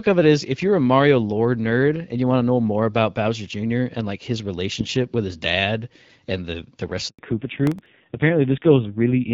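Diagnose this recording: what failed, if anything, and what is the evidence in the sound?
Handover gap at 7.09 to 7.19 s, network stage: right after "and the the rest" the speech cuts to silence for 100 ms while the call switched networks and no frames arrived.

Fallback to narrowband from 7.19 s to the end, codec stage: everything above 4 kHz disappears and the speech turns dull and rough, consistent with a low-rate narrowband mode.

Processor overload crackle at 7.67 to 7.86 s, driver or buffer stage: a handful of sub-millisecond buffers missed their deadlines and replayed stale audio, producing hard-edged gritty crackle.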